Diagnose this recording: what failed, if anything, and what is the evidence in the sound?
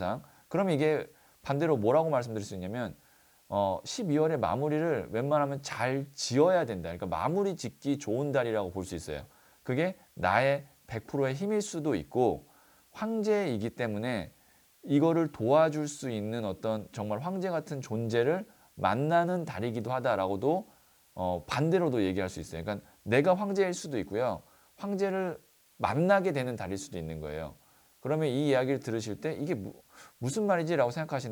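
A steady, even hiss sits under the audio from start to finish, about 35 dB below the signal, with no grit or distortion riding on the louder passages. That is low bit depth with dither, introduced at sample-format conversion: the audio was reduced to 9 bits, and dither added before rounding turned what would have been signal-dependent quantisation distortion into a constant white-noise floor. At 9 bits that floor sits high enough to hear clearly throughout.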